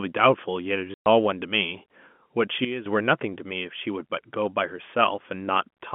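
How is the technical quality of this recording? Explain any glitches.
The recording has the narrow, telephone-band sound of G.711 coding, with little above 3.4 kHz. Two glitches stand out.

At 0.94 to 1.06 s there is packet loss filled with silence. The speech cuts out for 120 ms, leaving a dead gap with hard edges. The gap fits six lost 20 ms packets, and the receiver played silence in their place instead of concealing the loss.

From 2.65 to 2.86 s there is a sudden gain jump. The speech and the background noise both drop by about 12 dB in a single step, then return about 0.21 s later. This is likely a digital gain change applied without a ramp.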